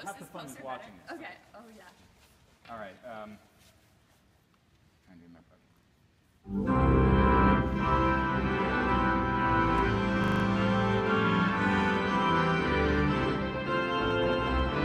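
At 10.24 s a system hang loop begins. A 40 ms piece repeats five times until 10.44 s, giving a 25 Hz stutter-buzz.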